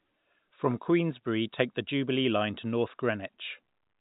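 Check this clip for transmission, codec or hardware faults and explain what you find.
No faults found; the speech carries the expected G.711 telephone-band limit, with nothing above 3.8 kHz.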